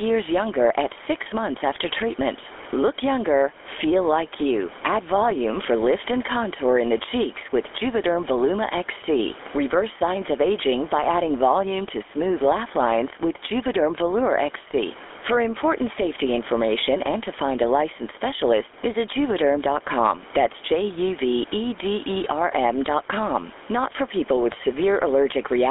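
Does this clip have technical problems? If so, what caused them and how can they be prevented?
Yes. Throughout the speech, the gain swings by around 10 dB, pulled down on loud syllables, so loud and soft parts sit closer in level and sound squashed. This gain pumping likely comes from excessive input gain driving a fast limiter. Lowering the microphone gain so the limiter rarely engages would prevent it.

Throughout, the speech sounds buzzy, gravelly and band-limited to roughly 300 Hz to 3.5 kHz, which fits the GSM full-rate codec's pulse-excited vocal-tract model at 13 kbps. Routing the call over a wideband codec would prevent it.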